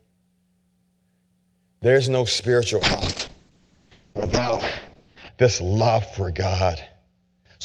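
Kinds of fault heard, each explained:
Call bitrate drop: the call's bandwidth estimate fell and the encoder was pushed from about 48 kbps down to 6 kbps, holding the lowest rate for about 2.5 s. Coarser coding and a cutoff pulled in from 20 kHz to 8 kHz follow. Right after "no spiritual", at 2.81 s, the speech turns rough and muffled, losing its top end, and stays degraded through to the end of the clip.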